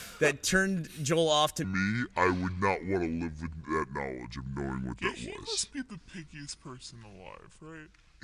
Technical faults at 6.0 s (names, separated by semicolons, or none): wrong sample rate